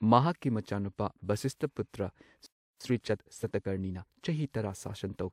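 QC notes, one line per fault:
2.46–2.81 s, playback stall: The speech cuts out just after "ꯃꯍꯥꯛꯀꯤ ꯃꯆꯥꯅꯨꯄꯥ ꯚꯁꯤꯁꯊꯄꯨꯇ꯭ꯔ" and stays silent for about 340 ms. It then resumes. The likely cause is the player running dry of data or its thread blocking, so output simply stops.
2.81–4.15 s, time-compressed catch-up: Right after the gap, the speech runs hurried at 1.25 times normal speed. Pitch stays normal. The player is trimming its backlog by cutting small pieces and cross-fading the joins.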